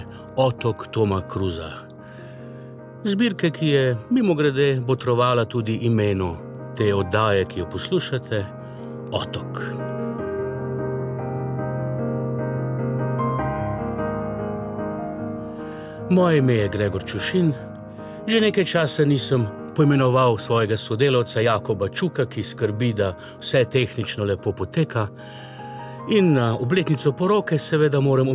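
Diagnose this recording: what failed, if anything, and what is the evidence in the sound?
Nothing in the signal chain has failed: the level, continuity and timing of the audio hold steady throughout, with no dropouts, discontinuities or distortion to point to any stage.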